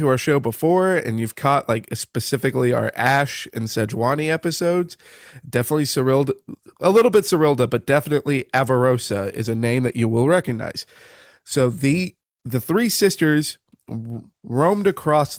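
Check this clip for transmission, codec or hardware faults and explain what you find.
No transmission, codec or hardware faults can be heard in this speech recording. There is nothing here that points to a problem in how it was captured, carried or decoded.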